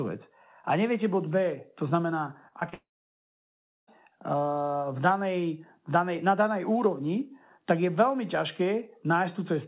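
Between 2.48 and 2.74 s there are three bursts of short concealed packet loss, at 2.48, 2.60 and 2.69 s, covering 40, 20 and 20 ms. Each time, the receiver bridged the gap by extending the preceding speech, so each is heard as a quick smear or wobble. They run directly into the next fault.

From 2.74 to 3.89 s comes a long network dropout, most likely stream interruption on the network. About 1.14 s of audio never arrived. The concealed tail fades within roughly a tenth of a second, leaving about a second of silence before speech resumes with that stretch missing. Across the whole clip, nothing is present above 4 kHz, which fits a G.711 mu-law call path.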